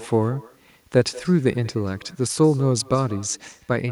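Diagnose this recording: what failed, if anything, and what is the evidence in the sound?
Echo with no canceller, at the call-processing stage, running through the whole speech clip. Each syllable is trailed by a faint, thinner repeat about a fifth of a second later, sitting about 22 dB below the direct sound. The far end is playing the call over a loudspeaker, its microphone is picking that up, and nothing is subtracting it before it returns. On a spectrogram, every speech burst has a dim duplicate shifted right by that same short gap. On the waveform, a small ghost envelope follows each onset.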